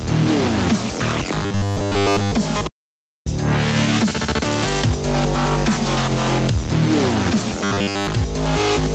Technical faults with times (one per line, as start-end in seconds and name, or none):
0.00-8.95 gain pumping
1.43-2.33 robotic sound from repeated short buffers
2.67-3.26 audio dropout to silence
7.64-8.07 robotic sound from repeated short buffers